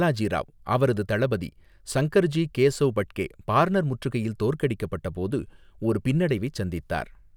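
Listening through the speech, nothing stood out as a technical problem at any point.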